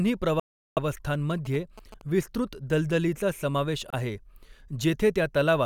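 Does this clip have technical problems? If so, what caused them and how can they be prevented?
Yes. Speech cuts out from 0.40 to 0.79 s and again briefly at 3.90 to 3.94 s, just after "विस्तृत दलदलीचा समावेश", then resumes as if it had kept playing. This is likely a Bluetooth dropout: audio packets reached the headphones too late and were discarded. Keeping the phone close, with a clear line of sight and less 2.4 GHz traffic, prevents it.

From 1.31 to 2.02 s, just before "विस्तृत दलदलीचा समावेश", a galloping pattern of short 217 Hz buzzes sits about 20 dB below the speech. These are GSM signalling bursts: a nearby 2G phone's radio bursts are rectified by the audio circuitry. Keeping phones well away from the equipment, or in flight mode, prevents them.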